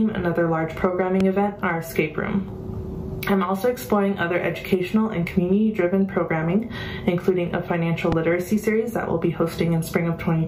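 Sharp loud pops strike at 1.20–1.23 s and 8.12–8.14 s, the second harsher, roughly 15 dB over the sound, likely a voltage spike from a switch or static.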